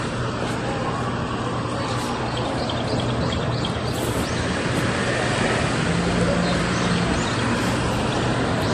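From start to finish the audio has a dull, smeared top end and a mix of two kinds of compression damage: swirly, watery artefacts alongside a second layer of fizz and pre-echo blur. This is likely transcoding between lossy codecs, with the sound pointing to a low-rate MP3 around 48 kbit/s re-encoded as WMA. On a spectrogram, energy stops sharply at 15.2 kHz, with patchy, blocky holes below.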